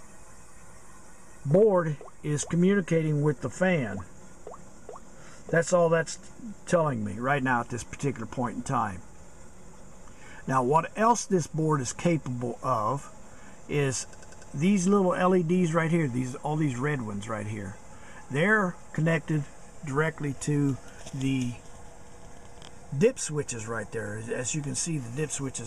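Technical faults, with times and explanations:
14.13 to 14.51 s, repeated frames: a 96 ms slice of the sound plays four extra times in a row, so you get a quick stutter that loops the same fragment before things move on. That length fits a run of about three compressed frames being written or sent more than once, and the decoder just plays each copy as it arrives. Because nothing is dropped to make room, the clip runs 384 ms longer than it should.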